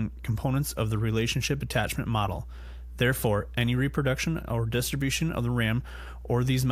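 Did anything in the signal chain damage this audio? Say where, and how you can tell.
Yes. The damage happened in the analogue wiring, where a ground loop or a nearby transformer let the 60 Hz power line leak into the signal. The result is mains hum: a steady low tone, with a few low harmonics, running under the speech for the whole clip at roughly 15 dB below it.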